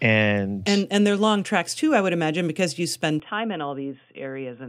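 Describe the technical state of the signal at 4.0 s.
From 3.20 s on, input switched to a poorer device, likely narrower-band: dull speech, spectrogram empty above 3.5 kHz, waveform about 5 dB lower.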